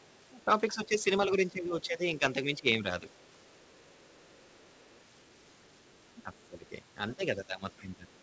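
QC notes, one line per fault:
0.02–0.22 s and 3.11–6.46 s, other side's voice leaking through. A second voice sits faintly under the speech. It is about 40 dB down at first and about 35 dB down in the longer stretch. The echo canceller likely left some loudspeaker sound in the microphone.
0.45–2.22 s, 2.59–3.04 s, 6.23–6.72 s and 7.16–8.11 s, speech suppressed in double talk. The speech dips in short pieces, well under a second in total per stretch. Drops reach about 15 dB, and about 10 dB in the second stretch. Overlapping talk likely made the canceller duck both sides.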